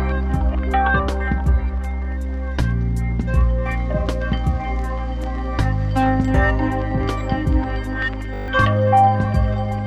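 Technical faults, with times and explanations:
8.34–8.48 s, system hang loop: the system froze and a 20 ms chunk replayed seven times, giving a brief 50 Hz buzz and losing around 150 ms of audio.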